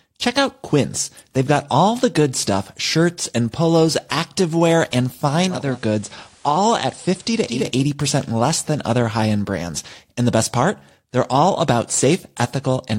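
Right after "and polos activewear and", at 5.46 s, it's digital radio blending to analogue FM over about 0.32 s: faint hiss, about 2 dB quieter, until 7.74 s before "less than other high".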